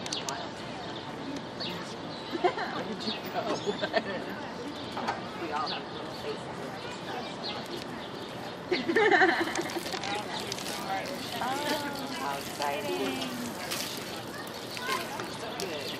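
Nothing here gives away any technical trouble; the audio just carries on steadily with no glitches, dropouts or odd artefacts to point out anywhere along the way.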